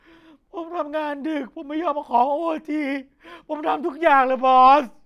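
No technical faults can be heard in this recording.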